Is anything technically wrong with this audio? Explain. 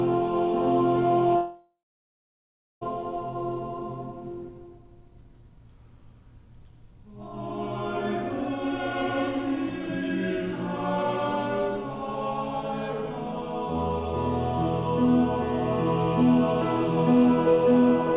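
Yes. There is a long network dropout from 1.36 to 2.83 s, heard through a call path band-limited to 4 kHz. The last sound smears into a fading buzz, then about a second of silence follows, and the audio resumes with roughly 1.5 s gone. The cause is likely lost packets being concealed by the receiver. That decaying buzz before the silence sets it apart from a plain edit or mute, which would cut off abruptly.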